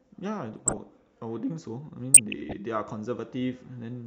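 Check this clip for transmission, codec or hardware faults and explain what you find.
Two stretches of DAB burbling affect the speech, from 0.53 to 0.87 s and from 2.14 to 2.53 s. Bit errors at a fraction of a percent slip past error correction, corrupting MP2 scale factors so individual sub-bands jump in level frame by frame. The result is blips of noise and sudden level jumps in single sub-bands over continuous audio, not the gaps of dropouts.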